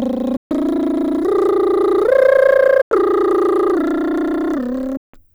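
Bluetooth dropouts at 0.37 to 0.51 s, 2.82 to 2.91 s and 4.97 to 5.14 s cut the music to silence for about 139, 93 and 163 ms. Each likely comes from wireless packets arriving too late and being discarded, and the music resumes further along, as if it had kept playing.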